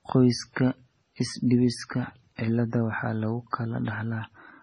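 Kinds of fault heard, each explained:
MP3 compression: heard throughout, likely from heavy MP3 coding at a starved bitrate near 24 kbps. The encoder removed everything above 10.5 kHz and discarded weak detail.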